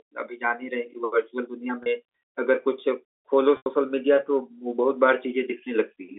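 At 1.83 s there is packet loss with pitch repetition. About 30 ms of audio went missing, and the receiver bridged the gap by repeating the last pitch period, so the speech briefly sounds held and slightly buzzy. At 3.57 s a longer 90 ms loss, consistent with several consecutive packets, occurs. The repeated period fades out over roughly 50 ms into a short silence, and the speech then resumes through a brief cross-fade. Both events sit within the narrow 300 Hz to 3.5 kHz band of G.711 telephone coding.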